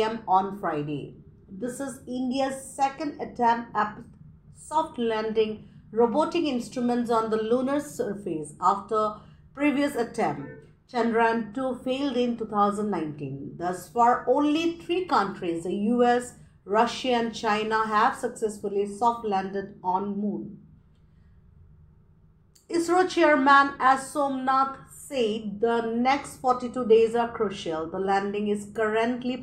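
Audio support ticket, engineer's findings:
No faults found in this clip. Playback path checked across the full recording with nothing to flag.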